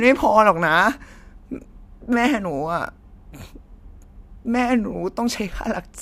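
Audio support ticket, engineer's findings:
No audible faults found on the speech recording.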